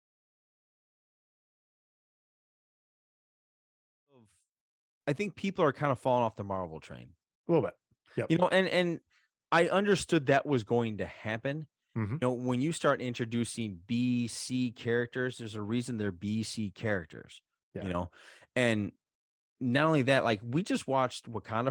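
Nothing stood out on listening, and the speech comes in with a smooth, editor-style fade that reaches full level at about 5.12 s.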